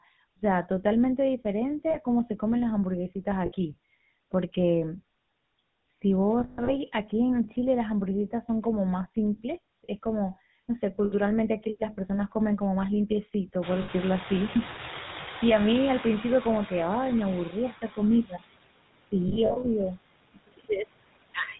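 The whole clip runs through the GSM full-rate codec, probably the 13 kbps mode, so the speech has that buzzy, gravelly roughness and nothing above 4 kHz. A noise suppressor is pulling the background down by about 20 dB throughout, so the noise that's left pumps between and under the speech.

Lost GSM frames show up at 1.9 s (40 ms), 3.46 s (60 ms), 6.4 to 6.73 s (200 ms scattered, longest gap around 150 ms), 11.04 s (80 ms), 13.82 s (60 ms, just as the room noise climbs), and 19.28 to 19.65 s (180 ms in short bursts). Each one rings metallically where the decoder repeats the last good frame.

Speech cut by the noise suppressor happens at 18.24 to 18.42 s and 20.34 to 20.7 s. Bits of speech dip by up to about 16 and 21 dB and sound swallowed.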